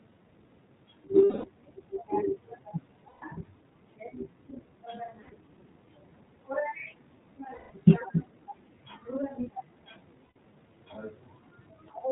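Throughout, the speech carries the sound of the iLBC codec: it is band-limited to below 4 kHz and has a slightly rough, synthetic edge, with the coding damage plainly audible. The codec models each frame's excitation independently. The character fits its 20 ms-frame mode at around 15.2 kbps, trading the finer detail of the voice for robustness.

Lost iLBC frames interrupt the speech five times: 1.24–1.47 s (about 200 ms), 3.08–3.24 s, 5.22–5.33 s, 7.54–7.71 s and 10.24–10.36 s. In each gap the decoder fills in by repeating the last pitch cycle mixed with noise, so the sound becomes a held, faintly buzzy vowel. Because each frame decodes on its own, the voice recovers cleanly right after every gap.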